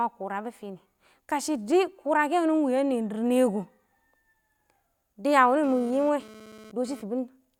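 From 5.64 s to 7.02 s, GSM phone buzz cuts in: a nearby 2G handset bursting about 217 times per second during a data transfer is rectified by the audio circuitry. It sounds like a harsh, harmonic-rich rasp about 22 dB below the speech, intermittent rather than steady.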